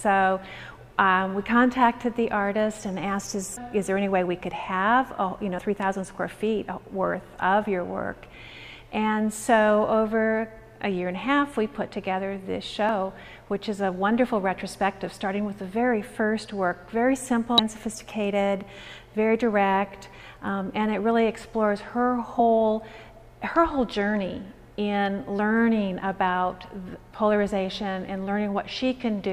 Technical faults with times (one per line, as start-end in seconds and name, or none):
5.57 damaged data in a compressed stream
12.89 damaged data in a compressed stream
17.58 damaged data in a compressed stream
22.39 damaged data in a compressed stream